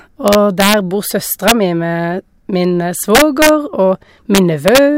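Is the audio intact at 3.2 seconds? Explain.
No, 3.2 seconds falls inside a stretch of integer overflow running from about 3.15 to 3.49 s, right after "mi med min". The speech there is pushed roughly 3 dB past the integer ceiling, and instead of being held at the limit, those peaks wrap around to the opposite sign, jumping across the full range. What you hear is a run of harsh, violent cracks on the louder bits, much nastier and sharper than ordinary clipping.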